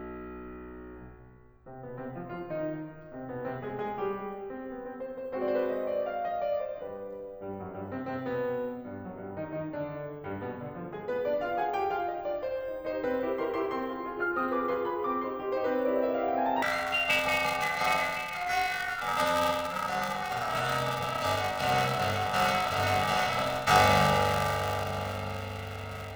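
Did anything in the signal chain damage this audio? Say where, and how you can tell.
Yes: planar audio read as interleaved, 16.62 to 26.15 s, a sample-format conversion fault. The music turns into a robotic 345 Hz buzz without octave shift, which fits 128-sample blocks.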